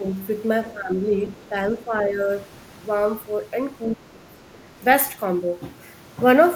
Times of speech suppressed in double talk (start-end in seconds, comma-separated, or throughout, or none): 0.00-0.04, 0.74-0.96, 1.27-2.30, 3.96-4.40